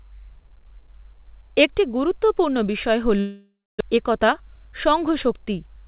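From 3.2 s to 3.83 s the speech breaks off in what is likely a long network dropout. The last sound is stretched into a buzzy, fading continuation. The final stretch, about 0.27 s, is silence. About 0.4 s of speech never returns. On a spectrogram, smeared, decaying harmonics end in an empty band. The waveform shrinks to a flat line before the speech resumes. The delay gained was roughly a fifth of a second.

From 3.96 s to 5.33 s a jitter buffer speed-up drains that backlog. The receiver trims short pitch-period slices over and over, so the speech runs about 5% fast at unchanged pitch, sounding slightly hurried. In total, roughly 70 ms is cut out. The waveform shows small, seamless splices between periods. On the spectrogram, the harmonic lines stay level while syllables are compressed in time. Throughout, the call codec's band limit leaves nothing above 4 kHz.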